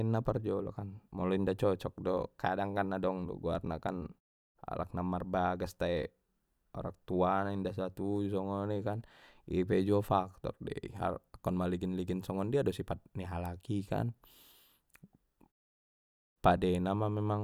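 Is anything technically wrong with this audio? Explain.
No, nothing in this speech recording stood out as a technical problem on listening.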